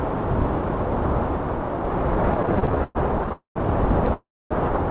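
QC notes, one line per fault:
2.34–3.32 s, repeated stalls (stutter): the sound catches and restarts 19 times in under a second. The receiver's buffer kept running dry, and each time it stretched the last sound to cover the wait. That filler adds up to about 0.3 s, roughly a third of the span, with the longest hold lasting 112 ms. Nothing is lost, so the audio drags rather than skipping. What sets this apart from a freeze is the many short hitches in quick succession, not one long halt.
3.32–3.57 s and 4.13–4.53 s, call audio freeze: each time the sound hangs on a held tone that fades away, then picks up exactly where it stopped. The first hold fills 0.23 s, ending in 0.13 s of silence. The second fills 0.37 s, ending in 0.26 s of silence. The likely cause is packets delayed in transit, which emptied the jitter buffer. The freezes differ from the stutter in being single long pauses, and from a dropout in that no sound is missing, only delayed.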